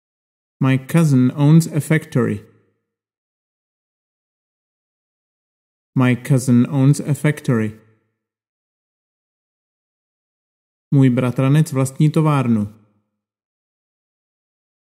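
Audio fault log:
No fault to log.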